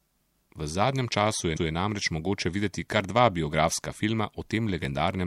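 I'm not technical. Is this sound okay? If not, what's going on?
No. This speech has repeated frames: at 1.56 s a 157 ms chunk of the recording was stored twice, so that bit plays again, causing a brief stutter.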